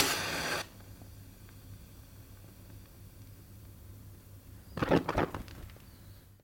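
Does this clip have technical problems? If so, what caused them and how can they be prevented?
No, the recording of these sounds has no audible technical faults, so there is nothing to prevent.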